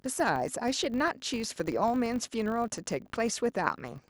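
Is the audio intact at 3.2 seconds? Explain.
No. At 3.2 seconds the speech carries a filter restarted on every block, a fault that runs through the whole clip. The filter loses its memory at each block boundary and starts again from silence. Each restart leaves a small transient. These ticks repeat at 50 Hz, which points to blocks about 20 ms long. They merge into a buzz under the speech. The buzz grows louder and softer with the level of the speech.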